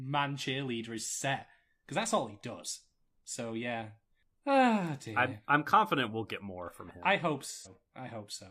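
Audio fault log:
7.52–7.73 s, AAC frame loss with concealment: right after "from him I hope", about 128 ms of coded audio went missing, which points to roughly three lost frames. The decoder covered the gap by re-using the last good spectrum, scrambling signs or interpolating energy instead of leaving silence. Because the gap is short and never fades to silence, the patch comes across as a brief smeared, noisy or phasey stretch where the real speech should be.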